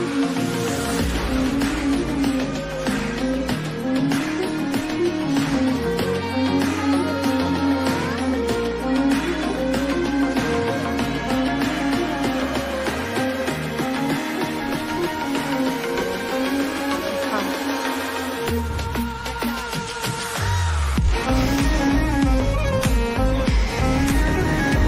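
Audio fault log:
12.89 s, dropped buffer (overrun): an abrupt skip forward. Likely samples were overwritten before being read, losing roughly 15 ms.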